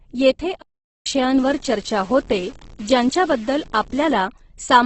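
From the start and throughout, the speech sounds rough and grainy, with heavy compression damage and nothing above 8.2 kHz. This is likely Opus compression in its music (CELT) mode at a rate near 12 kbps. On a spectrogram there is a hard ceiling at 8.2 kHz, with noisy, smeared texture in the bands below it.

From 0.62 to 1.06 s the sound cuts out mid-flow for about 0.44 s and then resumes. This is a playback stall: the player likely briefly had nothing to output. The waveform shows a flat line, and the spectrogram shows a blank vertical gap across all frequencies.

From 1.38 to 4.13 s a gritty distortion rides on the speech and changes with it. Quiet stretches crackle or sputter instead of fading smoothly. This is low bit depth without dither, likely the signal truncated to 7 bits, with the error roughly 25 dB below the signal. A zoomed waveform shows staircase steps, and the spectrogram fills with signal-following noise.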